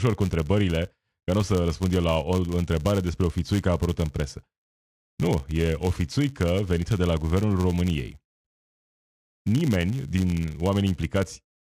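Speech runs the whole clip with a filter restarted on every block. Each block's filter begins from silence instead of carrying its state over, so every block boundary starts with a small transient. Those transients repeat 100 times a second, which points to 10 ms processing blocks, and merge into a rough 100 Hz buzz. Unlike mains hum, which holds steady, this buzz rises and falls with the speech level and fades when the signal drops.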